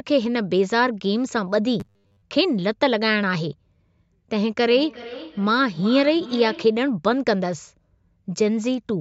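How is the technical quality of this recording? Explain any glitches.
The recording has two clear faults, a short robotic stretch and a longer echo, heard through call microphone processing that trims the lowest bass.

Robotic sound from repeated short buffers, 1.80 to 2.22 s: the voice becomes a rigid, metallic buzz pitched at 100 Hz that still loosely tracks the speech. The likely cause is audio arriving too slowly, so the software kept looping the last 10 ms of sound to fill the gaps, repeating most of what was heard while the real audio was skipped.

Feedback echo between two devices, 4.65 to 6.86 s: a thinner, ringing copy of the speech returns at intervals of around 400 ms, peaking about 16 dB below the direct voice. One device played what another's microphone sent, and that microphone picked it up again. Each device's echo canceller removes only its own playback, so the sound circulated between them.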